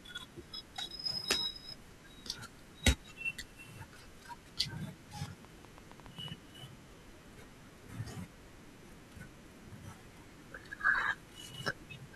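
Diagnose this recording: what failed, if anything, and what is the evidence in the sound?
A train of clicks runs through the speech from 5.26 to 6.29 s. About ten sharp pulses arrive at roughly 8 per second, unevenly spaced. They share much the same shape and peak at about 10 dB above the speech, so they tick over it rather than hide beneath it. The stage is likely the analogue wiring, with interference from nearby equipment coupling repeated pulses into the line before conversion.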